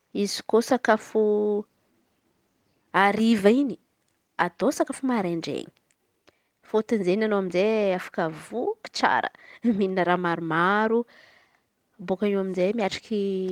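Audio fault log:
Nothing to log here; listening all the way along this speech recording, there's no fault to be heard anywhere.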